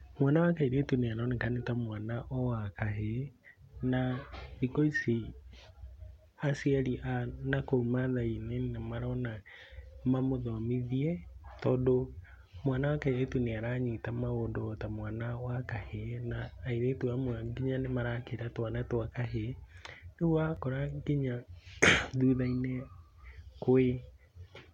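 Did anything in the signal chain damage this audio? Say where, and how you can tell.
Yes. At 20.56 s the speech has a tiny click, a brief buzzy tick rather than an audible stutter. This is a repeated buffer at the driver or buffer stage: a slice of about 1.45 ms, which fits a 64-sample buffer, played twice more, hard-joined, replacing a few milliseconds of audio.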